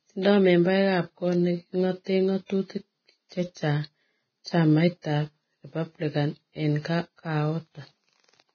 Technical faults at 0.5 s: Vorbis compression

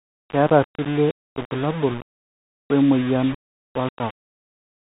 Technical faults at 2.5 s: low bit depth without dither; Bluetooth CVSD headset codec

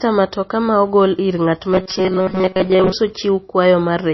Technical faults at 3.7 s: low-bitrate audio saved at a high bitrate

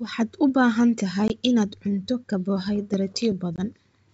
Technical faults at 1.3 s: packet loss on an ADPCM call

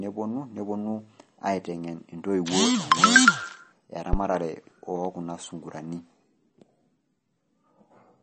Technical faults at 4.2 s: MP3 compression; phantom power thump

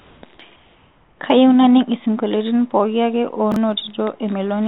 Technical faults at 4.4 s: none

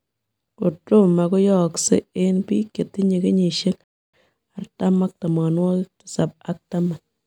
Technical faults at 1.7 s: none

